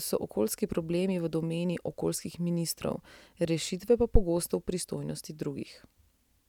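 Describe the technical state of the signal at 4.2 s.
A phantom power thump occupies 4.15 to 4.24 s, just over 80 ms of the speech. A supply voltage was switched on or off on a live input, and that sudden DC step passed through the input's coupling capacitors as a single low-frequency surge. It sounds as a deep, dull thud peaking at about −8 dBFS, and its low-frequency energy dies away quickly, over roughly 18 ms, leaving a brief heavy knock rather than a lingering boom.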